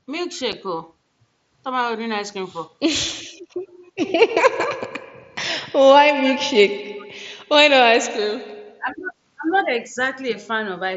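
At 0.52 s there is unconcealed Bluetooth headset packet loss. A gap of about 7.5 ms opens in the speech, which fits one lost frame on the link between headset and phone. Nothing was patched in to cover it. Silence or an idle pattern takes the place of the missing audio. The edges of the hole are abrupt.

From 3.24 s to 3.7 s the background is gated by the echo canceller. The far-end loudspeaker was active, and the canceller pulled the microphone down hard to stop echo leaking back. The room sound falls by up to about 21 dB for roughly half a second. The ambience dips toward silence, then comes back when the canceller releases.

Between 8.77 s and 9.13 s the speech drops sharply, by around 20 dB at its deepest, over a fifth of a second or so. This is likely speech suppressed in double talk. Both sides were talking at once. The canceller could not tell the near talker from loudspeaker echo and turned everything down. 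The voice dips during that stretch, heard through the wideband mSBC headset link.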